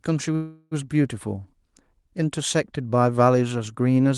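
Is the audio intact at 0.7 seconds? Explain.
No. A call audio freeze runs from 0.35 to 0.74 s, likely from delayed packets draining the jitter buffer. About 360 ms of fading buzz or hiss fills the gap, then the speech resumes later, with nothing lost. On a spectrogram this appears as a smeared, decaying band.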